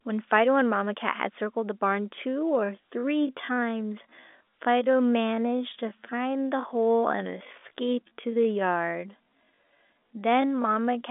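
From 2.27 s to the end, the speech abruptly slows to 0.667 times its pace while pitch holds steady. That marks a time-stretched section rather than slowed playback, which would also lower pitch. Software repeating short slices likely caused the dragging pace.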